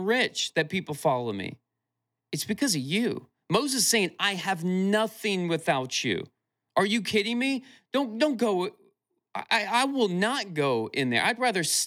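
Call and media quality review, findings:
No audible faults found on listening; the speech holds steady with nothing to flag for any component.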